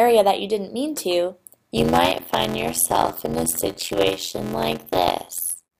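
Block size mismatch (padded) from 1.76 s to the end: each stage writes shorter blocks than the next reads, zero-filling the remainder, which fits a 512-sample read block. The sound gains an 86.1 Hz buzz and plays at 0.625 times speed, pitch roughly unchanged.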